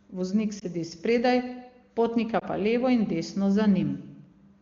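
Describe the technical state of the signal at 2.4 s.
At 2.40 to 2.44 s, just before "pa levo in", a lost AMR speech frame causes a brief dip or warble. The decoder repeats the previous pitch and vocal tract settings at reduced gain, unlike a silent dropout.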